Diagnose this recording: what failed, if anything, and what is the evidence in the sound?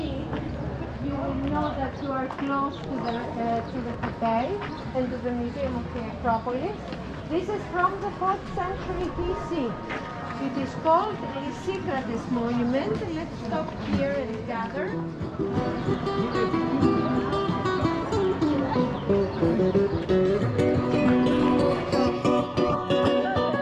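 A DC step at the converter: at 20.86 s the waveform baseline jumps about -40 dBFS, giving a low thump, then decays through a 20 Hz high-pass; the spectrogram shows a brief low-frequency smear.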